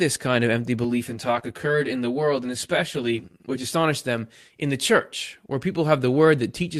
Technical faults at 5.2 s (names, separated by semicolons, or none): none